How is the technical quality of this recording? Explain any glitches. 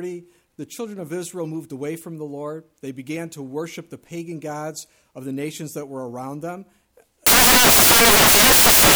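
The recording breaks down near the end: from 7.27 s through to the final moment, the samples are built from the wrong bytes. The reader is joining each sample's bytes incorrectly, whether shifted by one byte, in swapped order or with the wrong alignment, so the rapidly changing low bits land in the high-value positions. The result is loud, harsh broadband noise, close to white on the louder sounds. Unlike ordinary hiss or background noise, it comes from the sample values themselves being scrambled.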